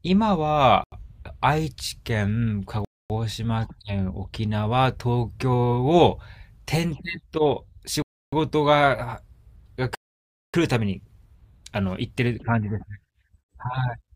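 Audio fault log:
0.84 to 10.54 s, Bluetooth stall: the speech cuts to clean silence at 0.84 s (82 ms), 2.85 s (252 ms), 8.02 s (303 ms) and 9.95 s (587 ms), then resumes where it paused, likely a headphone buffer running dry during wireless interference. The gaps are silence, not clicks or repeats.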